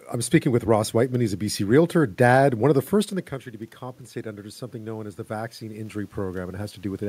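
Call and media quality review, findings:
Automatic gain rising, 4.13 to 7.04 s, just after "the country to be". AGC reacting to input falling about 14 dB after the talker moved back near 3 s; it climbs about 6 dB, so voice and room noise swell together.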